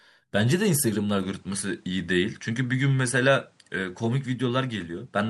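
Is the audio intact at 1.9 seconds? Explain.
No, from 1.23 s to the end it's an input switched to a poorer device, likely, so the speech loses everything above 10.7 kHz, with new background noise appearing.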